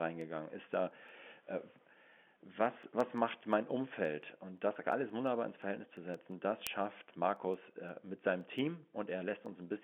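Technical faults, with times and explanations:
0.21–9.81 s, word clock ticks: the receiving device on the digital link runs on its own clock rather than locking to the sender's, and the two drift apart by roughly 100 parts per million. Each time they slip past each other, a single sample is dropped or repeated and its neighbours are misread. This produces a tick about every fifth of a second, around fifty in all, sitting on top of the narrow telephone-band speech.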